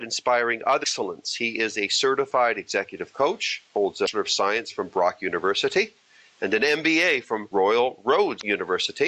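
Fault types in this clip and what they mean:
Damaged data in a compressed stream: Some of the compressed data reaching the decoder was corrupted, so it could not read those frames correctly, lost sync and had to hunt for the next valid frame header before carrying on. Each time this shows up as a short glitch lasting a little over 50 ms, breaking into the sound at 0.80, 4.04 and 8.37 seconds before normal playback resumes.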